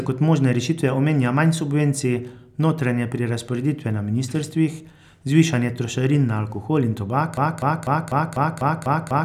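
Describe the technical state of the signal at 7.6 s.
At 7.6 s the signal is stuck in a broken-record loop. Starting at 7.37 s, right after "na alkohol in tobak", a fragment of about 0.25 s repeats exactly, back to back, through to the end of the clip, heard as a stuttering, machine-like repetition of one sliver of sound eight times over. The likely cause is a player or stream stalling and resending its last buffered piece. The real audio for that stretch is lost. On a waveform or spectrogram, identical blocks tile at a fixed 0.25 s period.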